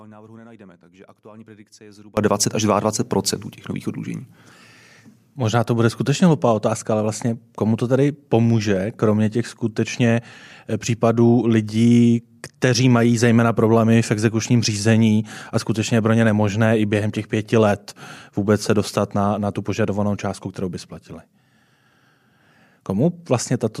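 From the first moment until 2.17 s, the clip is in an audio dropout to a faint residue. The speech is already missing when the audio begins. Only a faint leak of sound remains, around 25 dB below the normal level. At 2.17 s the full signal returns abruptly, not as a fade. The likely cause is a brief loss of the wanted signal while the path after the break stayed live and passed only this low residue.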